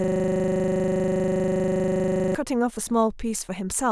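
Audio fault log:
0.00–2.35 s, system hang loop: already under way when the sound starts, the system froze while playback kept cycling one 40 ms buffer, repeating it into a rattling 25 Hz buzz.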